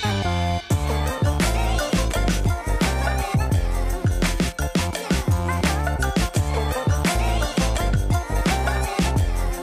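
No technical faults are audible.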